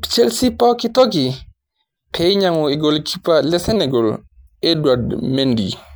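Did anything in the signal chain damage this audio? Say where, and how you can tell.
Yes. From 3.76 s to the end, the speech suddenly slows by 6.3% and drops 113 cents, just over a semitone. Speed and pitch shift together. This is likely a drift correction step at the buffer stage, where clock-matching software abruptly changed the playback rate.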